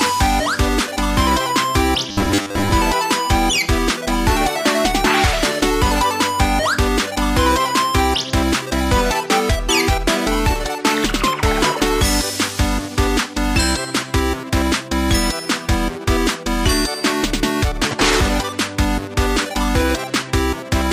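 From 2.09 to 2.72 s, the sound turns into a rigid, metallic buzz. This is robotic sound from repeated short buffers. It likely comes from audio arriving too seldom, so a 10 ms fragment is replayed in place of about half the signal. The repeats impose a fixed 100 Hz pitch.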